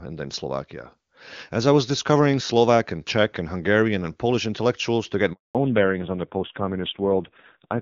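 A handover gap runs from 5.33 to 5.55 s, right after "intellectuals to get". During the network switch no speech frames reached the decoder, so the speech fades out within a few tens of milliseconds and stays silent for 220 ms. Whatever was said then is lost.

A fallback to narrowband follows at 5.55 s and lasts to the end. Before it, the speech has the clean, extended top of HD Voice, consistent with AMR-WB near its highest rate. Afterward nothing remains above 4 kHz, and the speech sounds dull and rougher, which fits a drop to low-rate AMR-NB around 5.9 kbit/s.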